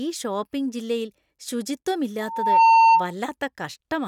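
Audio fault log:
2.20–3.13 s, loudspeaker feedback squeal: the microphone picked up its own loudspeaker, loop gain passed unity at 905 Hz, and a tone swelled within half a second to about 15 dB above the speech.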